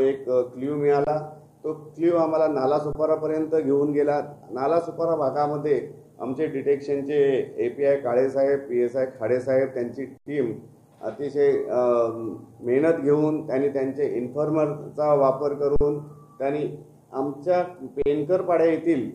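Underrun with held sample occurs at 1.05, 2.93, 10.18, 15.76 and 18.02 s, lasting 23 to 88 ms. The output buffer ran dry, so the converter froze on its last value and the sound stops flat. The 23 ms gaps fit a 1024-sample buffer. Playback then resumes where it stopped, so each dropout ends softly.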